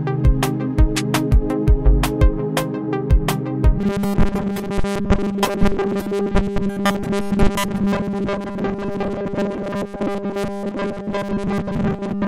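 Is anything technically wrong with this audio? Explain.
Yes. From 3.79 s to the end, the sound turns into robotic sound from repeated short buffers: a rigid, metallic buzz at 200 Hz. This likely comes from new audio arriving too seldom, so most of the time a segment of about 5 ms is looped while real audio is skipped.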